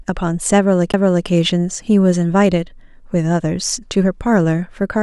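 CD skip at 0.92 s: the player's laser jumped to another turn of the disc's spiral, so playback cuts out for a brief mute of around 15 ms, heard as a tick or short gap, then resumes from a different point in the speech, breaking its continuity abruptly.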